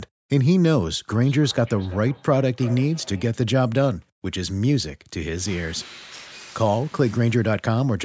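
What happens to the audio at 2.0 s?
Two devices on the same call are feeding each other: one plays what the other's microphone sent, and that microphone picks it up again. From 1.1 to 3.43 s, this feedback echo between two devices repeats the speech roughly every 0.3 s, about 20 dB below it.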